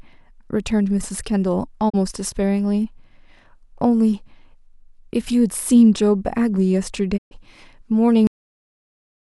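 A speech recording with two digital broadcast dropouts, at 1.88 to 1.96 s and at 7.16 to 7.33 s. In each, the receiver muted after losing frames, fading out over about 20 ms and returning once good frames arrived. The gaps fit one lost frame of 32 ms and four frames totalling 128 ms. They show as short tapered notches to silence in the waveform and as full-height blank columns on a spectrogram. At 8.27 s the clip has a cut-off end: the final buffers never played, so the sound stops mid-syllable with no decay. The waveform drops abruptly to a flat line that runs to the end, and the spectrogram shows a hard vertical edge, possibly with a broadband click stripe.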